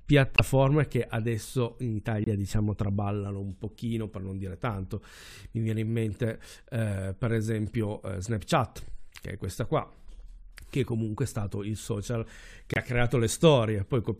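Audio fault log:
0.36–0.40 s, 2.24–2.27 s and 12.74–12.78 s: corrupt frame muted. Three gaps of about 35 to 40 ms cut into the speech. Each starts abruptly as dead silence. The first falls just before "che adesso in". The second sits between "che adesso in" and "diciamo traballano un pochino". The third follows "stato il social che". The decoder rejected damaged compressed frames, and the player filled each hole with silence. Timing is kept. The gap lengths fit one or two lost frames.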